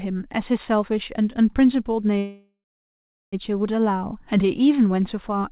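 Speech carried over a narrowband call path with nothing above 4 kHz, and a call audio freeze from 2.18 to 3.35 s: the last sound trails off into about 0.76 s of silence, likely from a jitter buffer running dry. Unlike a dropout, speech resumes exactly where it stopped, arriving about 1.15 s late with nothing lost.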